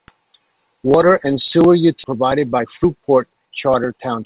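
At 2.04 s, just after "and sewer", there is a skip ahead: roughly 0.7 s of speech was discarded while later audio was already queued. Playback jumps straight to that later audio with no silence or fill, so the two sides meet almost directly.

From 2.14 s to 3.94 s, a jitter buffer speed-up follows. To work off the excess delay, the receiver repeatedly removed short pitch-period-sized pieces, about a fifth of a second in total. Speech runs at about 110% speed with unchanged pitch and sounds hurried. All of this sits on a narrowband call path with nothing above 4 kHz, consistent with G.711 mu-law.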